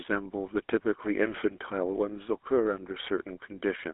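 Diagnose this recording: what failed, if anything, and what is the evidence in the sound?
The failure is at the codec stage: GSM full-rate codec damage runs the whole clip. Nothing reaches above 3.8 kHz, and the speech carries a plain buzzy, gravelly roughness. Simple 300 Hz to 3.5 kHz telephone filtering would narrow the band but leave it smooth. The roughness comes from sparse pulse excitation, consistent with a 13 kbps stream.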